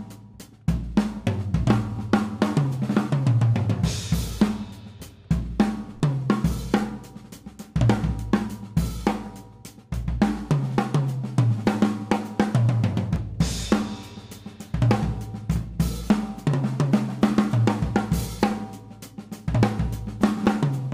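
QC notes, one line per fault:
3.96 s, 6.0 s and 13.16 s: dropped buffer (overrun). Each is a quick jump where the sound skips ahead by around 20 ms with no gap, likely because the software didn't read its samples before the hardware wrote over them, so the two sides butt together.
20.46 s: dropped buffer (overrun), likely the same mechanism but a bigger skip of roughly 70 ms, so the jump in the sound is larger.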